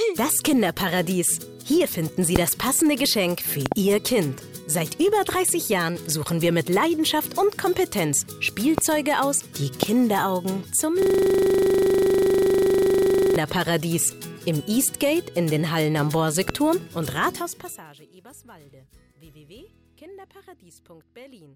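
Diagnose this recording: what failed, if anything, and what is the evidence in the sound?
Loud pops sit on top of the sound at 2.36, 8.78, 9.83 and 16.49 s, with a double pop between 3.66 and 3.74 s. Each peaks roughly 20 dB above the programme, and the audio carries on underneath without interruption. That rules out dropouts or digital clicks from missing samples. These are likely voltage steps entering the analogue wiring, from a plug, a switch or static, then shaped by the circuits that follow.

A system hang loop runs from 11.02 to 13.36 s. A single 40 ms slice repeats exactly, about 58 times, and produces a steady buzz at 25 Hz. The driver or host froze while the hardware kept replaying its ring buffer, which fits a buffer about 40 ms long. Unlike a codec stutter or network packet loss, the repeats are identical and perfectly periodic, with no gaps or concealment smearing between them.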